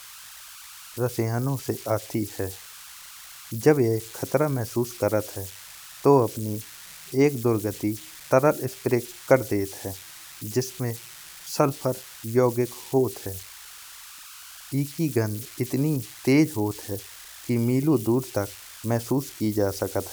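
Converter idle tones run through the whole of this speech clip as a whistle around 1.5 kHz, sitting about 18 dB below the speech. They stand out in the pauses and add a grainy edge under the quieter passages. The cause is a delta-sigma converter working without dither: when its input drops low, the modulator settles into repeating bit patterns, and those cycles come out as a tone whose pitch follows the input's offset.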